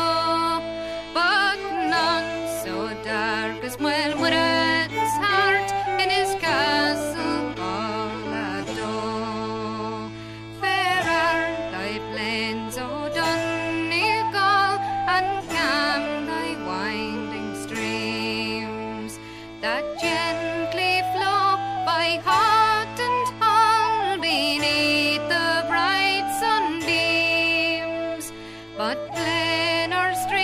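Right around 7.76 s the adaptive stream drops to a lower bitrate and holds there until about 11.76 s, four seconds in all. The player seems to have hit a slow patch in the connection and switched versions mid-flow with no gap. The quality falls off a cliff: the treble disappears above roughly 12.3 kHz and codec artefacts rise in what's left. It sounds like a step down from decent AAC to a very lean HE-AAC stream, around 16 kbit/s.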